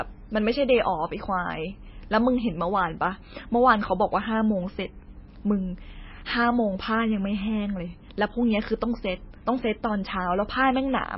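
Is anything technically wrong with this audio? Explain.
Yes. Throughout, the speech sounds watery, with nothing above 5.6 kHz. Likely heavy MP3 compression, fitting about 18 kbps, cut the treble and dropped weak frequency lines.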